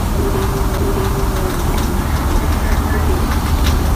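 At 0.78 s the audio drops out for a split second with a small tick, then resumes from a different point in the program. This is a CD skip: a knock or disc flaw made the laser jump to another turn of the spiral.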